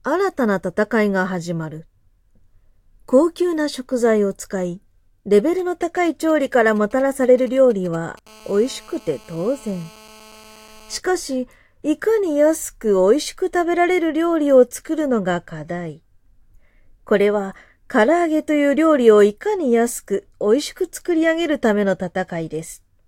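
From 5.59 to 8.19 s, galloping dit-dit-dit ticks and short 217 Hz buzzes sit roughly 25 dB below the sound: GSM signalling bursts, a nearby 2G phone's radio pulses rectified by the audio circuit. From 8.27 to 10.99 s a hard, raspy 217 Hz buzz, rich in harmonics and about 27 dB down, holds steady: GSM phone buzz from a nearby 2G phone transmitting in bursts during a call.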